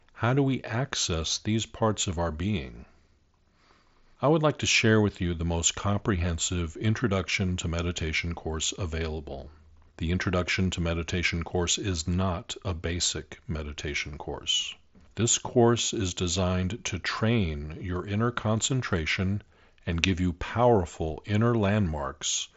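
No technical faults occur in this speech, which arrives over a Bluetooth mSBC headset link with nothing above about 7.7 kHz.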